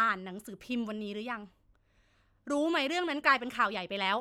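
Nothing in the recording stood out as a technical problem on listening.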